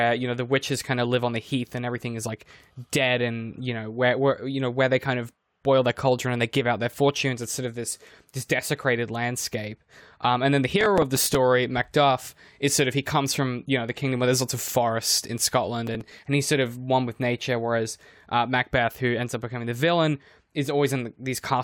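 At 10.81 s, just after "and then the", a burst of processor overload crackle runs for about 0.54 s, to 11.35 s. It returns from 15.87 to 16.19 s, ending just before "and he's sort of". Each time, the processor misses its deadline for short buffers of around 5 ms, about ten times in the first burst and several in the second, and replays stale audio with hard edges. The result is a gritty tearing over the speech.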